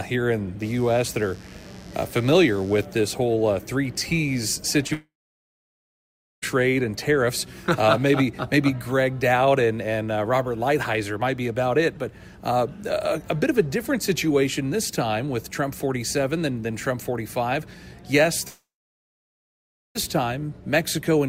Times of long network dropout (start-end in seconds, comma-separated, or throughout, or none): 4.93-6.44, 18.48-19.97